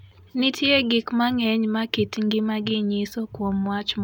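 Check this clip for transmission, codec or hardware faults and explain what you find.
No faults can be heard anywhere in this speech recording. Nothing in the audio stands out as worth flagging.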